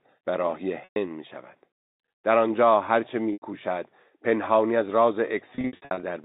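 Packet loss with pitch repetition occurs at 0.84 to 0.96 s (120 ms lost), 3.33 to 3.42 s (90 ms), and again across 5.55 to 6.03 s, where about 300 ms goes missing in runs no longer than 60 ms. Each gap is filled by repeating the last pitch period, so the speech briefly holds on a buzzy, frozen tone that fades out over about 50 ms, and in the longer gaps it fades into silence before the speech returns with a short cross-fade. This sits inside the band-limited telephone sound of the G.711 line.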